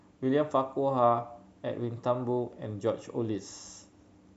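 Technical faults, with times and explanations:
No technical faults can be heard anywhere in the speech. There is nothing to time or explain.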